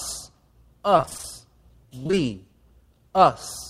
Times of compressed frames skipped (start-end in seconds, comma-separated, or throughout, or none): none